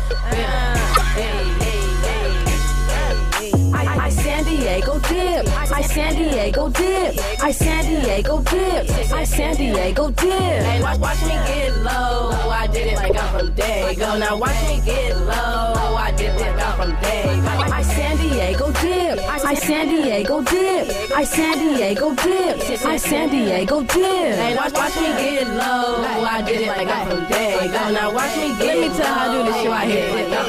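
Seven short bursts of corrupt frame decoded damage the audio, at 0.94 to 1.01 s, 5.33 s, 7.14 to 7.18 s, 9.74 to 9.78 s, 13.03 to 13.15 s, 17.58 to 17.63 s and 21.50 to 21.58 s. Each spans a few codec frames, the one at 13.03 s being the longest. Flipped bits in those frames were decoded anyway, so misread gains and codes place energy at wrong frequencies, heard as chirps or noise bursts. Unlike lost-packet concealment, which smooths or repeats sound, these add foreign, unrelated energy.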